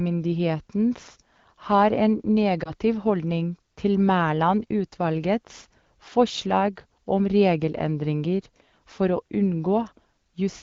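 At about 2.64 to 2.71 s, just before "holdning til", a lost AMR speech frame interrupts the speech. One 20 ms frame failed to decode, so the AMR wideband decoder filled the gap by repeating the previous frame's pitch and vocal tract settings at reduced gain. It is heard as a brief dip or warble. On a spectrogram, the harmonics smear and flatten over that short span. The waveform shows a small drop in amplitude before normal speech resumes.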